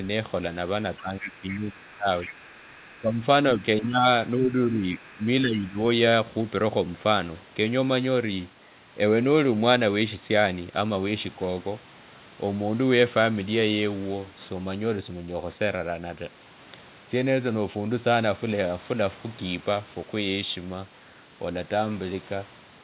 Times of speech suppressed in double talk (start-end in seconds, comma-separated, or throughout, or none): 1.00-3.18, 3.57-4.05, 4.37-5.77